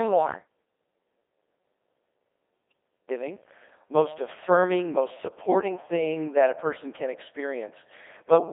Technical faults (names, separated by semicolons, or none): Codec 2 vocoder